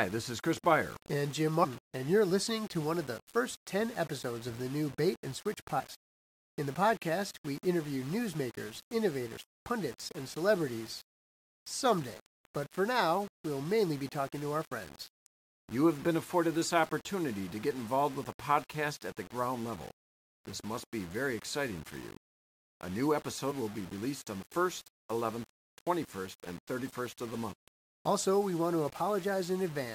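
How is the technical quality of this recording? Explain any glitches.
Pretty rough, honestly: the speech is grainy throughout, and five short glitches break through it.

Low bit depth without dither: the whole clip has a gritty distortion that tracks the speech, roughly 20 dB down. It's likely rounding to about 6 bits with no dither.

Damaged data in a compressed stream: brief glitches at 1.63–1.65 s (before "and you're listening to"), 5.78–5.81 s, 9.36 s (between "podcast we interview newsmakers" and "pundits and celebrities"), 23.50–23.52 s (before "will be released on") and 27.52–27.54 s. Each is where the decoder hit corrupt frames and resynced.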